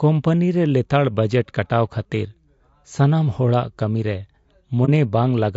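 A speech recording with plainly audible codec damage throughout: the voice sounds rough and grainy, with noise filling the gaps between harmonics, the typical signature of a low-delay codec whose short frames resolve pitch poorly. The likely cause is low-delay AAC compression (AAC-ELD), at a rate that fits about 32 kbps. From 4.85 to 4.89 s there is a brief dip, where AAC frame loss with muting left the decoder outputting silence, faded out and back in by the overlapping windows. The gap is consistent with a single lost frame.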